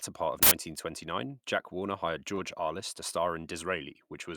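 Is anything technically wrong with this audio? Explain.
Yes, two things stand out in this speech clip.

At 0.43 to 0.51 s there's an uninitialised buffer. A block got played before any audio was written into it, so whatever junk sat in memory came out as an 85 ms burst of loud digital noise, which fits a 4096-sample block.

At 2.35 to 2.38 s there's a short concealed packet loss. About 20 ms of the stream never arrived in time, so the decoder papered over the gap by extending the preceding sound and then crossfading back into the real audio. It comes across as a quick smear or wobble in the speech.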